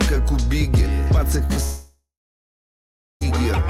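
At 1.45 to 1.52 s and again at 1.54 to 1.58 s there are two instances of short concealed packet loss. About 40 ms and then 20 ms of audio failed to reach the decoder on time. The receiver bridged each gap by extending the preceding sound. The result is a brief smear. On a spectrogram, each gap shows as a short patch of frozen, repeated harmonics or blurred noise.

From 1.64 to 3.23 s the sound stops for about 1.6 s. This is likely a long network dropout, in which nothing arrived and the missing audio was never recovered. The concealment first carries the last sound forward as a fading buzz or hiss. After that comes roughly 1.1 s of silence, which appears on the waveform as a flat line and on the spectrogram as a dark, empty band. The audio then resumes, and the lost stretch is simply absent.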